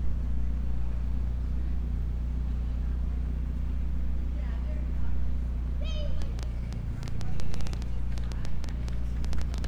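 From 6.22 s to the end at 9.65 s, a train of clicks ticks and pops over the sound, around 30 sharp clicks at about 7 per second, spaced unevenly and peaking roughly 10 dB above the material beneath them. Each pulse has much the same shape, so they read as one intruding source rather than damage to the sound itself. The likely cause is electrical interference from nearby equipment or a faulty connection or power supply.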